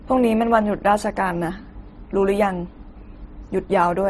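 Speech that has likely passed through transcoding between lossy codecs, a low-bitrate Opus-style encode followed by MP3, across the whole clip. Nothing is heard above 13.1 kHz, and the artefacts of the first codec sit under MP3's own, so both sets of artefacts are audible together.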